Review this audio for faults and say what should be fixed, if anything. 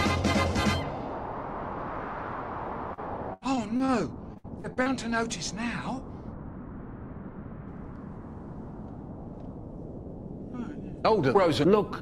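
Repeated packet loss, robotic sound, runs from 2.93 to 3.90 s and again from 4.34 to 4.88 s. Each stretch has five gaps. The first conceals about 19% of its span, with gaps up to 79 ms. The second conceals about 33%, with gaps up to 63 ms. Lost or late packets were each patched by extending the preceding sound, so the audio turns choppy. A spectrogram shows smeared, frozen bands that repeat over these spans. Prevent it with a steadier network path and a larger jitter buffer.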